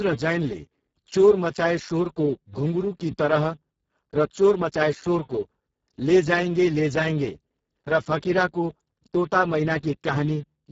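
From start to finish, the speech carries heavy Speex codec damage. Speex models the voice as a filter driven by an excitation signal. Here the sound points to a very low bitrate, around 6 kbps, so that excitation gets very few bits. The voice comes out noisy and hoarse. Nothing is present above 7.7 kHz.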